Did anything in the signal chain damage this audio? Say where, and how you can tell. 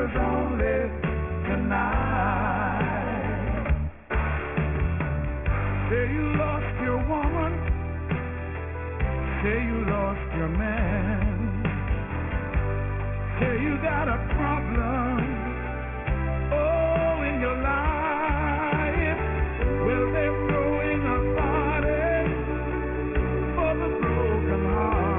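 Yes. A sample-rate conversion stage decimated the audio without an anti-aliasing filter, and the damage runs through the whole clip. Content that was above the new half-rate folds back around 3 kHz to unrelated frequencies, which fits a drop from 48 kHz to 6 kHz. The spectrum runs hard up to that 3 kHz edge, and the high-frequency detail turns gritty and metallic. The folded energy sits roughly 15 dB below the wanted signal.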